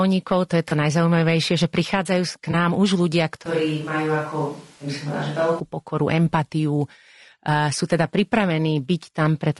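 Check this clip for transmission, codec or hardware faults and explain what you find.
Three kinds of fault are present: codec coloration throughout, two brief concealment patches, and a stretch that sounds like a different microphone.

Low-delay AAC compression, throughout: the speech is rough and grainy, with noise between harmonics and a thin top band. This likely comes from AAC-ELD coding at a low rate, around 32 kbps.

AAC frame loss with concealment, at 0.69–0.72 s (after "to je") and 2.51–2.55 s (after "najzaujímavejšie že prichádzajú k"): each is a brief smeared, noisy patch, consistent with one lost 20 ms frame filled in from the previous spectrum.

Switch to a distant microphone, 3.46–5.60 s, starting after "už ľudia": the speech abruptly turns roomy and hollow with less bass. The level stays about the same, and room noise sits about 30 dB below the speech. This is likely a fallback to a farther pickup.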